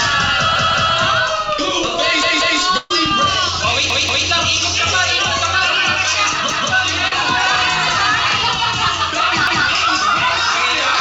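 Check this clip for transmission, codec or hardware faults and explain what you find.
Yes, there's trouble here: a recurring repeated buffer stutter, plus one burst of packet loss and one short concealed packet loss, all riding on a call path that sounds like G.722 at 64 kbps, with nothing above 8 kHz.

The repeated buffer shows up five times, at 0.56, 2.23, 3.90, 6.50 and 9.47 s. Fresh audio didn't arrive in time, so the device replayed its last chunk, about 186 ms long, which fits an 8192-sample buffer. The first three replay twice and the last two once, giving a hard-jointed stutter. No audio actually seems to go missing.

The burst of packet loss runs from 2.77 to 2.91 s, with about 130 ms dropped. The receiver stretched the last bit of sound and faded it down across the hole, so you get a held, dimming buzz or hiss, then a jump ahead.

The short concealed packet loss sits at 7.08 to 7.12 s, roughly 40 ms. 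The decoder patched the gap by extrapolating the preceding sound and crossfading back into the real audio, so it comes across as a quick smear or wobble.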